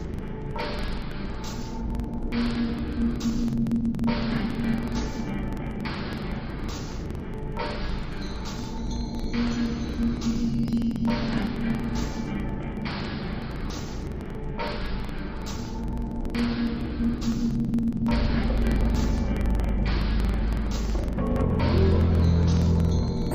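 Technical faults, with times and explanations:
Throughout: interleaved audio read as planar. The sound plays an octave low, doubled and choppy, with a flutter at about 21.5 Hz. Each block of alternating left and right samples is split down the middle, so the first half becomes left and the second half right. Each channel then plays its stretch at half speed while the pair still covers the block's full duration. Blocks run about 46.44 ms, which fits a 2048-sample block.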